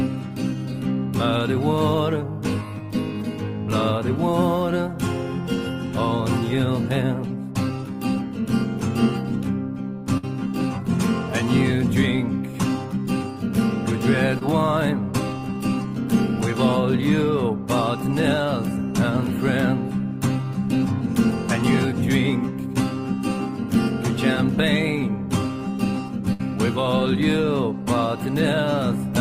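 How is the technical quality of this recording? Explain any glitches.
The recording has three brief dropouts where audio went missing in transmission.

Burst of packet loss, at 10.17 to 10.25 s and 26.33 to 26.41 s: late or lost packets left a gap. The receiver stretched and faded the last sound over roughly 55 to 65 ms, then skipped ahead about 60 ms.

Short concealed packet loss, at 14.39 to 14.43 s: about 20 ms never arrived. It was patched by continuing the preceding sound, heard as a quick smear or wobble.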